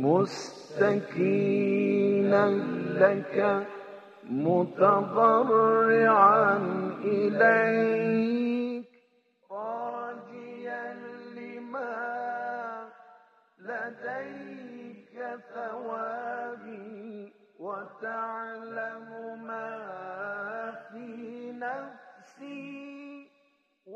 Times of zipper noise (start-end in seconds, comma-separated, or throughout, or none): 8.55-8.93